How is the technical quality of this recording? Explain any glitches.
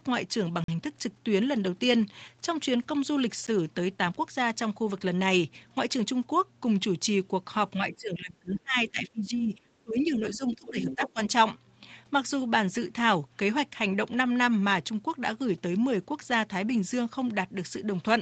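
The recording has three kinds of audible glitch, all bunched into the first 11.2 seconds of this speech clip.

Blocks of digital silence at 0.64–0.68 s (43 ms, which fits a 2048-sample buffer) and 3.47 s (11 ms, fitting a 512-sample buffer): output buffers likely went unfilled, so the sound cuts out abruptly, the 43 ms gap as a short hole and the 11 ms one as a tick or dip. The waveform shows flat gaps, and the spectrogram shows vertical lines at each edge.

Speech suppressed in double talk, 7.76–11.19 s: with both sides talking, the echo canceller likely pulled the talker down by up to about 20 dB across roughly 3 seconds. The voice dips and fragments, visible as a sagging, patchy envelope.

Other side's voice leaking through at 8.54–8.59 s (about 20 dB below the speech) and 10.65–11.10 s (about 10 dB below): likely residual loudspeaker echo reaching the microphone uncancelled. It is heard as a quieter second voice, with extra harmonic traces on the spectrogram.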